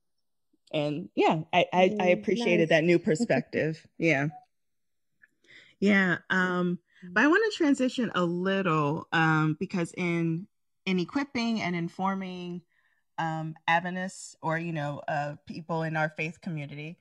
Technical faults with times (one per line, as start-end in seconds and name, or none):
0.00-17.01 channels drifting apart